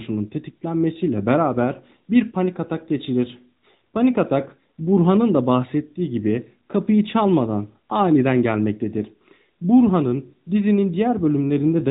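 From start to finish the speech carries AMR narrowband mobile codec damage: nothing passes above 3.8 kHz, and the voice has the buzzy, synthetic edge of a vocal-tract model rebuilt from a few pulses per subframe, at a moderate rate that fits 10.2 kbps. A simple low-pass filter would only dull the top. Here the voice texture itself is plainly altered, which points to the mobile codec rather than bandwidth limiting alone.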